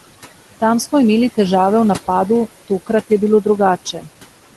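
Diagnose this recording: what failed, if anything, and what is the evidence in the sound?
Call processing stage: the noise suppressor is lowering the room noise by about 16 dB, band by band and frame by frame. The background sinks in the pauses and rises again under the speech throughout.

Call processing stage again: this is speech cut by the noise suppressor. Between 3.85 and 4.08 s the suppressor classed part of the speech as noise and turned it down by up to about 12 dB over roughly 150 ms, so that stretch sounds faint and swallowed.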